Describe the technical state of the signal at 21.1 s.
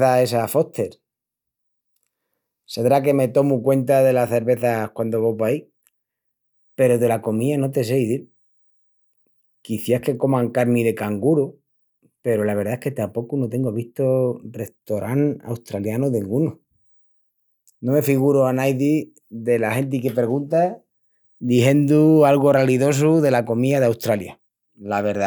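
At 21.1 s the speech signal is intact, with no audible fault at that moment.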